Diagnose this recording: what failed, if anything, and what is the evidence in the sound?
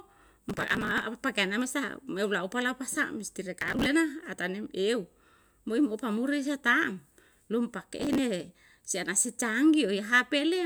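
Processor overload crackle at 0.50–1.02 s, 3.58–3.86 s and 8.00–8.19 s, a failure at the driver or buffer stage. Each burst is a gritty tearing over the speech made of many tiny dropouts. The processor misses deadline after deadline on buffers of a few milliseconds, and each late buffer is skipped, leaving a hard-edged gap. The first burst is longest, the last is shortest, and the crackle stops as soon as the load eases.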